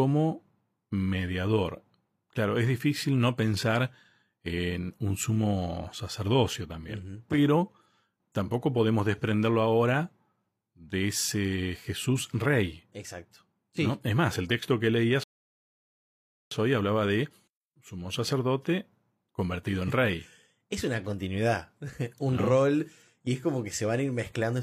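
At 15.24 s the speech halts in a rebuffering stall: the player exhausted its downloaded audio and waited for more, leaving about 1.28 s of dead silence until 16.51 s. The speech then picks up exactly where it broke off, with nothing skipped, so the clip simply runs longer. On a waveform this appears as a flat line splitting the speech; a spectrogram shows a blank vertical band with sharp edges on both sides.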